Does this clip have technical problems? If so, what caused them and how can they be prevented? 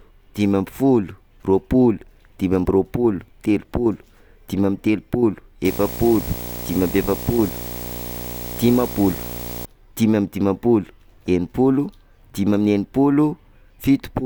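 Yes. From 5.65 to 9.66 s there's video or display buzz under the speech, fairly prominent at around 10 dB down: a screen or video cable is leaking into the audio, giving a 59.94 Hz field-rate buzz with hash and a thin 15.7 kHz line-rate whine. Keep audio cables and mics away from monitors and video leads, and use balanced connections.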